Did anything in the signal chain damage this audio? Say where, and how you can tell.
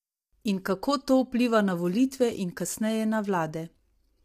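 Yes, at the codec stage, throughout the speech: a rough, grainy quality with noise filling the gaps between harmonics, likely low-delay AAC compression at a bitrate around 32 kbps. A spectrogram shows smeared, poorly separated harmonic lines, because short frames resolve pitch coarsely, and a thinned, synthetic-looking top band.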